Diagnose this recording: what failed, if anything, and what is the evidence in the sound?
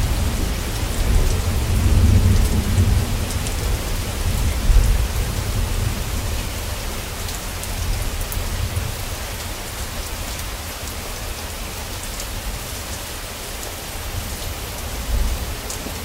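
The converter stage failed. From 13.81 s to the end at 16.04 s, a fine hiss and roughness rides on the sound. It swells on loud and bright passages and drops away in quiet gaps. This is sample clock jitter. The clock wanders by around a microsecond, so each sample lands slightly off time, and steep waveform slopes turn that timing error into noise roughly 35 dB below the signal. A spectrogram shows a raised broadband floor that tracks signal level and energy above a few kHz, collapsing in silence.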